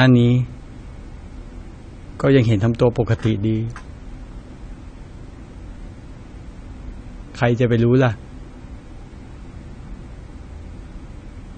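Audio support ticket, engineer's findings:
Speech dull and smeared throughout, no clean stretch. High end cut off, sibilants fizzy and warbling, gaps in the spectrum audible. Likely cause: AAC compression, AAC-LC, low-bitrate encode starving quantiser of bits, lowering bandwidth and dropping bands. Damage plainly audible; fits a bitrate around 32 kbps.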